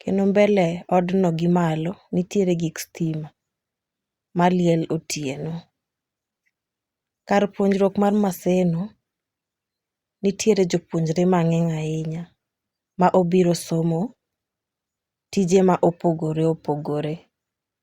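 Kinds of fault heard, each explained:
No kinds of fault are heard in this clip.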